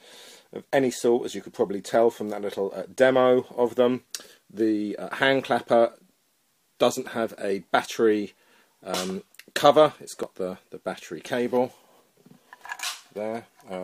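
At 4.25 s and again at 10.23 s the audio jumps forward abruptly, each skip removing a very brief sliver, around 15 ms. The six-second spacing points to audio missing between chunks, likely lost while one recording block closed and the next opened.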